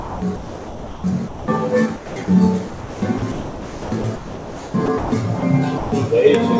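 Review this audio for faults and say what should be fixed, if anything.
Noise suppressor applied to music or sounds, throughout: a speech-oriented suppressor treats sustained tones and tails as noise, pulling them down by around 5 dB so the sound pumps and thins.

Sound chopped by the voice detector, 0.00–1.48 s, 1.96–2.28 s and 2.68–5.12 s: the sender likely kept toggling transmission, swapping roughly 1.1 s, 0.24 s and 1.74 s of sound for comfort noise.

Sound dropped by the voice detector, at 5.40 s and 5.78–5.92 s: the detector likely judged the sound as background and stopped sending, leaving steady comfort noise for 20 ms and 140 ms.

To prevent these, disable noise suppression and voice-activity detection (discontinuous transmission) whenever the call carries music or non-speech sound.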